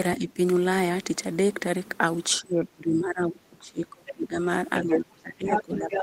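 From 0.18 to 0.38 s the speech dips by roughly 10 dB for a short stretch. This is speech suppressed in double talk: the far side was likely talking at the same moment, and the echo canceller, unable to tell the local talker from loudspeaker echo, turned everything down. A far deeper episode runs from 2.41 to 4.37 s, where the level falls by about 25 dB for nearly two seconds and the speech sinks well into the background.

Near the end of that stretch, at 4.07 to 4.13 s, the other side's voice is leaking through, a faint scrap about 15 dB under the speech. This is likely residual loudspeaker pickup that the echo canceller failed to remove. Stronger leaks follow at 4.76 to 5.0 s and 5.47 to 5.62 s, both roughly as loud as the talker. A third, about 5 dB down, comes at 5.78 to 6.0 s.

Overlapping those leaks, from 4.82 s to the end of the clip, the talker is suppressed again, dropping by about 15 dB.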